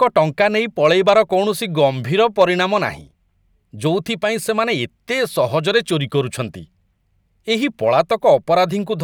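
Speech driven past what a stage in the chain can pass, so peaks are cut flat by hard clipping at 0.02–0.41 s, 0.85–1.19 s and 2.41–2.44 s. The overload is mild, about 2 to 3 dB, and adds high harmonics heard as crackle on those peaks.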